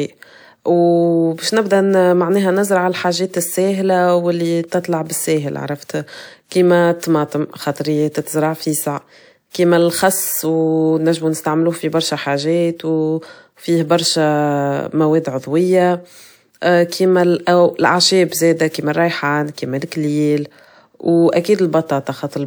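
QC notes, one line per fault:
4.67–4.72 s: pre-echo. About 46 ms of hiss leads into a sharp speech onset, which lands smeared. The codec spread noise sized for the loud attack across the quiet start of its block. Unlike reverb, the smear precedes the sound rather than trailing it.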